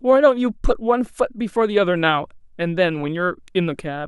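Nothing in the recorded speech points to a technical fault at any point in the clip.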